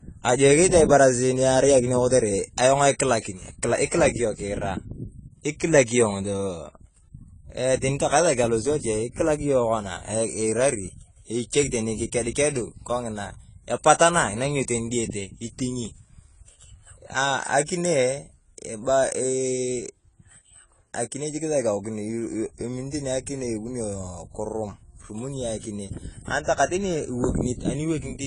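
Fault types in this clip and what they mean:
AAC compression: the speech sounds dull and smeared, with a warbling, fizzy edge on sibilants throughout, likely from AAC-LC coding at a low rate, which fits 24 kbps. A spectrogram shows a hard ceiling with nothing above 10 kHz.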